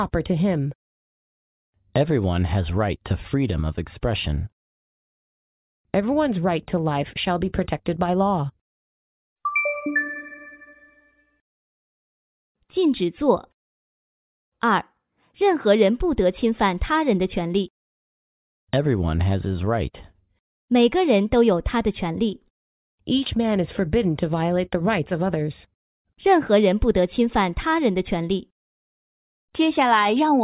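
No technical faults can be heard anywhere in this recording.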